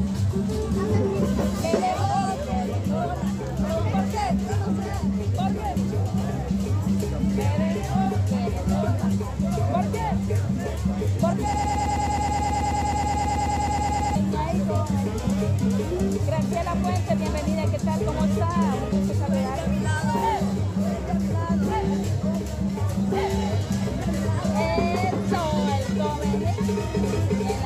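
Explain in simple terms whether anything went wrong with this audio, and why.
Something did go wrong: from 11.54 to 14.15 s there's a broken-record loop, where a tiny 0.11-second snippet repeats back to back 24 times. Most likely the player or stream stalled and kept replaying its last bit, so the real audio there is lost.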